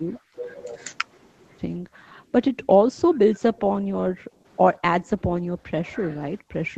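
From 1.79 to 4.45 s, what is likely speech suppressed in double talk sets in: with both ends talking at once, the echo canceller seems unable to tell the near talker from loudspeaker echo and turns everything down. The speech dips and breaks up for roughly one and a half seconds in total, falling by as much as about 35 dB at its deepest. The same suppression returns more lightly from 4.77 to 5.64 s, with dips of about 15 dB over roughly 0.4 s, and again from 6.04 s to the end, sinking by about 30 dB.

Between 2.63 and 2.67 s there is a likely echo leak. A loudspeaker end's echo canceller appears to have let some of its microphone pickup slip back into the call. The result is a faint copy of the speech arriving 135 ms late, about 30 dB below the direct signal, heard as a brief ghostly scrap inside the suppressed stretch.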